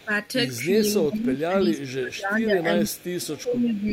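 From 0.0 s, a faint echo leak appears, a copy delayed 358 ms, about 35 dB below the speech. A loudspeaker echo canceller likely let it through. Speech suppressed in double talk also starts at 0.0 s. The speech dips at 0.72 s, 1.09 to 2.66 s and 2.85 to 3.89 s, by up to about 25 dB. The canceller likely ducked its own talker along with the loudspeaker echo. The echo returns at 2.88, 3.36 and 3.67 s, now about 25 to 30 dB down.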